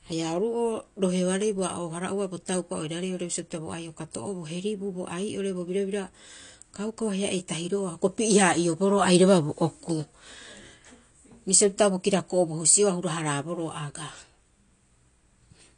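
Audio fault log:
Throughout: AAC compression. The speech is dull, with nothing above 9.8 kHz. Sibilants and held sounds warble and fizz. The likely cause is AAC-LC coding at a low bitrate, near 32 kbps. The encoder drops the high bands and coarsely quantises the rest.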